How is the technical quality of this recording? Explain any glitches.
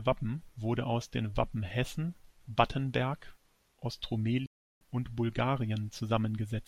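The recording has one clear glitch, a playback stall, between 4.46 s and 4.81 s. The speech cuts off abruptly in mid-flow and the output drops to silence for about 350 ms before the audio picks up again. The likely cause is the player briefly running out of buffered data, or its playback thread being held up, so nothing was sent to the output until it recovered. It is heard as a sudden gap breaking the continuity of the speech.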